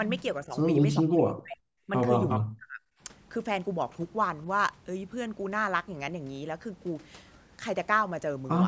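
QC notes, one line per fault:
0.41–2.82 s, speech suppressed in double talk: the speech dips at 0.41–0.56, 1.01–1.6, 1.87–1.91 and 2.38–2.82 s. The short ones lose about 10 dB, the longer ones nearly vanish, around 40 dB down. This is likely an echo canceller ducking the talker along with the far side.
2.29–2.4 s, echo leak: a brief delayed copy of the speech comes back about 364 ms late, only about 5 dB under the direct sound. This is likely loudspeaker pickup that the canceller didn't fully remove.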